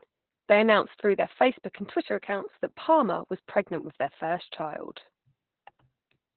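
Opus voice compression runs through the whole of this speech clip, and it is heavy. Nothing survives above 4.3 kHz, so the sound is held to a narrowband telephone-like range. The linear-prediction coder rebuilds the voice from a crude model of the vocal tract plus a coarsely quantised excitation. That gives the muffled, hoarse, faintly robotic texture heard here, which points to a very low bitrate around 8 kbps.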